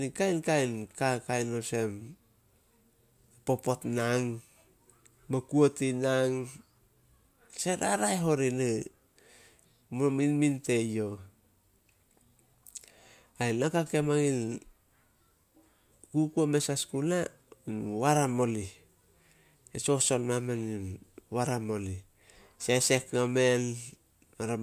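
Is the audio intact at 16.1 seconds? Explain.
Yes, the audio is intact at 16.1 seconds, with no audible fault at that moment.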